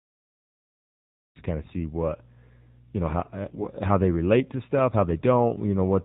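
A cut-off start opens this speech clip: digital silence runs from 0.00 s to 1.36 s, and the audio then begins abruptly in the middle of a sound just before "to kind of see", with no natural attack or fade. The recording or stream began late, so the first sound arrives already in progress and the jump from silence to signal is a hard edge. The AMR narrowband mobile codec affects the whole clip. The speech is band-limited, with nothing above 4 kHz, because AMR-NB samples at 8 kHz and rebuilds the voice from a vocal-tract model driven by a few pulses per 5 ms subframe. The buzzy, synthetic quality is plainly audible and fits a low mode such as 7.4 kbps, where too few bits are left to place the excitation pulses or shape the spectrum finely. AMR bit errors strike from 3.46 s to 3.68 s, between "you know how" and "how they relate to". Across about 0.21 s, a span that fits roughly eleven 20 ms frames, the voice keeps its approximate pitch and level but turns hoarse, scratchy and gargly. 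This points to a weak link flipping a few percent of the less protected bits while the checksum on the important bits still passed. As a result, the pulses land in the wrong places and the fine pitch, gain and spectral values drift.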